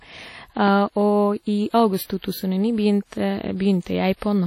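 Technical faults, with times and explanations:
Throughout, WMA compression: the speech has a washy, ringing quality with hiss that rises and falls with the signal, and nothing comes through above about 16.1 kHz. That's likely a WMA-style transform codec at a low rate, something like 32 kbps, smearing quantisation noise across long blocks.
0.68 to 0.70 s, loud pop: a single sharp pop sits on top of the speech, roughly 10 dB above it, lasting about 20 ms while the talking carries on underneath. It's likely a brief voltage spike from a plug, switch, static or driver glitch.
2.04 to 2.10 s, pre-echo: a short hiss creeps in about 57 ms ahead of a sharp attack, which then sounds soft and smeared. The codec spreads noise sized for the loud onset across the whole block, so it fills the quiet gap before it too.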